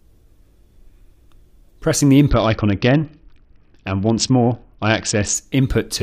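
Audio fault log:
2.30–5.35 s, Bluetooth SBC bit pool drop: treble dulls and gritty noise rises as the encoder starves, consistent with a bit pool falling from about 31 to 7, near 61 kbps. The spectrogram's upper bands empty abruptly, lower bands turn grainy, then recover.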